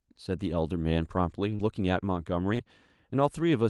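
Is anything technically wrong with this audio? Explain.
Yes. Short concealed packet loss occurs at 1.55–1.61 s and again at 2.55–2.61 s in this call-path speech clip, which is band-limited near 12 kHz. Each time, roughly 40 ms of audio arrived too late, and the receiver extrapolated the preceding sound before blending back. The result is a brief smear or wobble.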